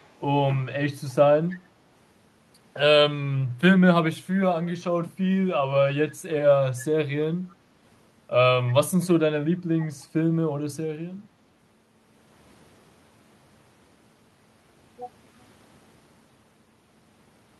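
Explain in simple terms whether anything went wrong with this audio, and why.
A few faint echo leak scraps turn up, at 0 to 0.08 s, 1.49 to 1.56 s, 6.79 to 6.85 s and 7.49 to 7.55 s: brief, quiet copies of the speech trailing about 0.31 s behind. Likely someone's speakerphone echo cancelling let a little slip back.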